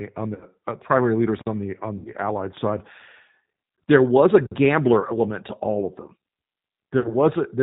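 Throughout, the speech carries the sound of the G.729 codec at 8 kbit/s, in its lighter G.729A form. Nothing above 4 kHz survives, and the codec damage is plainly audible: the voice is rebuilt from a vocal tract filter, a pitch predictor and a handful of pulses per frame, so it sounds rough and slightly synthetic. A plain telephone-band filter would be muffled but clean. Here the harshness comes from the sparse pulse excitation, not just the missing top end.

At 0.35 to 0.45 s comes the first VoIP packet loss concealed by the speech codec, about 60 ms of missing audio. That fits six lost 10 ms frames. The second, at 1.97 to 2.12 s, is longer, about 80 ms. At 5.00 to 5.13 s the loss is different: 40 ms in short gaps of no more than 10 ms each, scattered over about 100 ms. The last, at 7.00 to 7.14 s, is another 40 ms. In each case the decoder keeps extrapolating its last pitch and filter while lowering the gain, so the voice turns into a buzzy tone or a coloured noise that fades. 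Because each frame builds on the one before, the voice stays weak or distorted for a short while after the packets return.

A simple dropout would leave a gap of silence or a click. Here the hole is filled with a stretched, dying version of the sound that just played.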